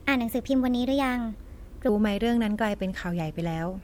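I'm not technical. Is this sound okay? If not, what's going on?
No. From the start to about 1.89 s there's a section at the wrong speed: the speech runs 1.2 times too fast, so it sounds rushed and roughly three semitones higher. That part was likely played against the wrong clock before the speed returns to normal.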